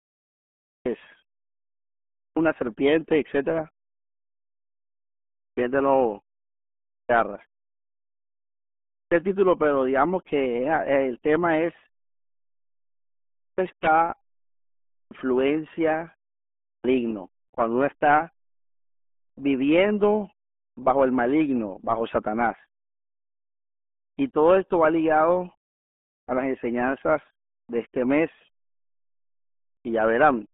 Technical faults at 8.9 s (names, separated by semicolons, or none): RealAudio 14.4 codec; clipped start after a pause